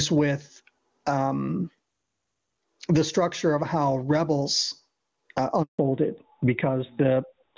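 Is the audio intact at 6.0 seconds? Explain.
No. At 6.0 s the audio is inside a fallback to narrowband, which starts at 5.79 s and runs to the end of the clip. The call has dropped from HD Voice to an older narrowband codec, so the speech is now carried only up to 4 kHz. Everything above that is gone, leaving the voice dull and rougher compared with the wideband section before it. The sound points to a switch from AMR-WB at its top rate down to AMR-NB.

The same moment also carries gain pumping, which is present through the whole clip. The level swings by roughly 15 dB, so loud and soft parts sit close together and the sound feels squashed. The likely cause is input gain set far too high, with a fast limiter or compressor pulling it back on every peak.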